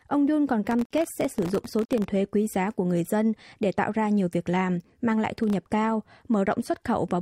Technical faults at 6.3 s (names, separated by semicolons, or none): none